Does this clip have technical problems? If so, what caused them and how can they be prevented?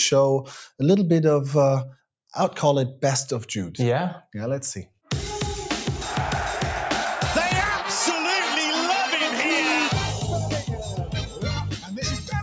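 Yes. A noise suppressor built for speech was left running on material that isn't speech, so throughout the clip it keeps mistaking sustained tones, ambience and reverb for background noise and turning them down. The level rides up and down by about 5 dB as the suppressor opens and closes. Attacks pass fairly cleanly, but held sounds and decaying tails sag, giving the audio a pumping, thinned character on top of the call's microphone path, which has nothing above 8 kHz. To prevent this, disable noise suppression or switch the call to a music or original-sound mode when sending anything other than speech.

The same suppressor also cuts individual sounds hard when it briefly classifies them as noise. The deepest cut runs from 4.86 to 5.10 s, about 17 dB down. A cluster follows near the end: 11.25 to 11.43 s (about 10 dB), 11.74 to 11.97 s (about 12 dB) and 12.18 to 12.34 s (about 10 dB), each lasting roughly 0.15 to 0.2 s, so sustained or fading material briefly sinks in level or has its decay chopped short. 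Turning off the speech-oriented suppressor for non-speech sources prevents these cuts as well.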